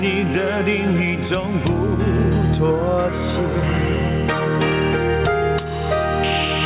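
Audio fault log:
throughout: gain pumping. The gain drops about 10 dB under each loud sound. Likely excessive input gain driving a fast limiter.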